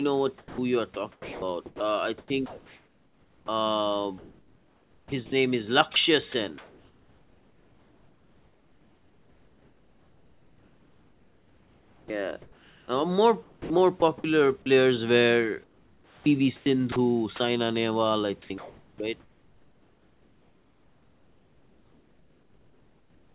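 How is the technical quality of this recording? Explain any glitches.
The recording is speech with frequent dropouts. The voice is repeatedly broken up by stretches of smooth, even hiss, and in one very short spot it vanishes briefly. The band stops at 4 kHz, which fits a G.711 mu-law call path at 64 kbps. Quiet room noise sits about 38 dB below the voice.

Sound chopped by the voice detector occurs at 0.38 to 3.48 s, 4.18 to 5.32 s, 5.94 to 12.88 s, 13.42 to 14.02 s, 15.64 to 17.4 s, and 18.42 s to the end. In each stretch the speech keeps cutting in and out, and the gaps fill with a flat, synthetic hiss. About 1.8 s, 1.0 s, 6.0 s, 0.3 s, 0.8 s and 4.65 s are replaced in turn. The likely cause is the sender's voice activity detector switching transmission on and off and sending comfort noise in place of quieter parts of the speech.

Sound dropped by the voice detector occurs at 14.62 to 14.66 s. 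The speech briefly gives way to a 40 ms patch of steady hiss before resuming, and about 20 ms of the actual sound is lost. The likely cause is the detector mistaking a soft moment of the speech for background. It stops sending, and the receiver fills the gap with comfort noise until speech triggers it again.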